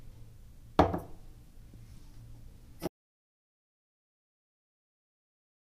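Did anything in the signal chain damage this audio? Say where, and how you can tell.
Yes. There is an audio dropout to silence from 2.87 s to the end of the clip, lasting about 2.9 s. The sound cuts off abruptly in mid-flow and never returns. The gap is digital silence with no room tone or noise floor, so the quiet comes from the chain, not the scene. The likely cause is a lost input at the wiring or device stage, with the recorder continuing to write silence.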